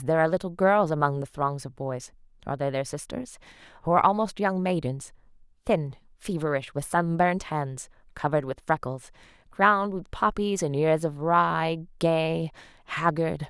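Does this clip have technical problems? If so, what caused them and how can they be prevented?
No, this clip has no technical problems, so there is nothing to prevent.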